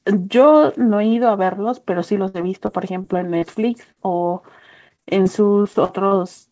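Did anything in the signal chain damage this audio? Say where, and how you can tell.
Yes. Repeated packet loss (robotic sound) at the network stage, at 2.28–3.98 s, 4.88–5.27 s and 5.63–6.13 s. Dropped or late packets leave holes up to 61 ms, each patched by extending the previous sound, so speech turns choppy with pieces missing.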